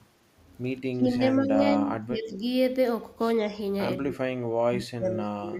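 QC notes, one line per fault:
0.92–2.42 s, 3.41–3.56 s, 4.02–5.2 s and 5.38–5.59 s: speech suppressed in double talk. The speech dips in level and breaks up in places. The first and third spans each lose about a second of full-level sound, dropping by about 20 dB and about 30 dB at worst. The short span at 3.41 s dips only about 5 dB. The final span falls about 20 dB. The likely cause is an echo canceller muting this side while both sides talked.
1.15–1.19 s: echo leak. A brief delayed copy of the speech is heard, about 20 dB below the direct sound. It trails the original by 183 ms. It lasts only a scrap, inside the first suppressed span. This likely comes from a loudspeaker echo that the far end's canceller did not fully remove, so part of the echo was sent back.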